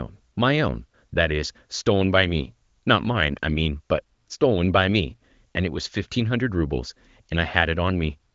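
No technical faults are audible.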